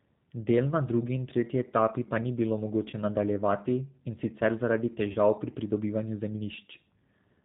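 Throughout the speech, the G.729 codec is plainly audible. At 8 kbit/s the voice is rebuilt from a vocal tract filter, a pitch predictor and a few pulses per frame rather than from the waveform itself, so it sounds rough and slightly synthetic. Nothing above 4 kHz survives, which leaves the sibilants dull and the overall tone boxy, consistent with the G.729A variant.

At 2.90 s, right after "etapi pa ni bilo", there is VoIP packet loss concealed by the speech codec. About 30 ms of audio is missing, which fits a single lost packet. The decoder fills the gap by repeating its last pitch and filter at falling gain, so the sound smears into a brief buzzy tone or coloured noise that fades until about 2.96 s before "nadaljevati in sicer zaradi". The same concealment occurs from 5.12 to 5.17 s, between "nadaljevati in sicer zaradi" and "pri pridobivanju". Each time, the speech stays weak or distorted for tens of milliseconds after the gap while the decoder's state recovers.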